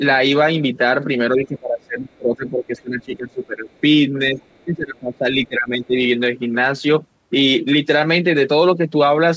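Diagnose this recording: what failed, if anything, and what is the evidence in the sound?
The speech sinks and loses presence in three places. From 1.36 to 3.69 s it is pulled down, at worst by about 20 dB, with roughly two seconds of that stretch affected. A brief dip of about 10 dB follows at 4.31 to 4.39 s, then a longer one from 4.64 to 5.95 s, again reaching about 20 dB. This is speech suppressed in double talk, likely the call-processing echo canceller attenuating the near talker while the far end was active.

Faint scraps of a second voice sit under the talker at 2.77 to 2.82 s, 3.73 to 3.80 s and 4.40 to 4.64 s, about 35 to 40 dB below the speech. This is the other side's voice leaking through, likely residual loudspeaker echo that the echo canceller in the call-processing stage failed to subtract fully from the microphone signal. The leaks cluster around the suppressed stretches, where the canceller was struggling to separate the two talkers.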